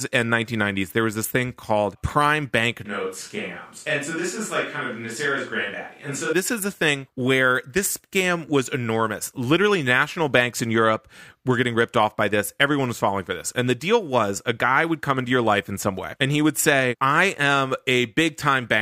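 From 2.86 to 6.33 s, after "this thing called prime", speech turns hollow and about 5 dB quieter. Likely a switch to a distant microphone.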